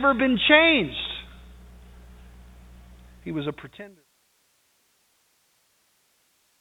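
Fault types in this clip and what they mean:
No faults are present in this speech recording. It has a telephone-style band limit with nothing above about 3.8 kHz, and the level fades out smoothly from around 3 s to 4.08 s.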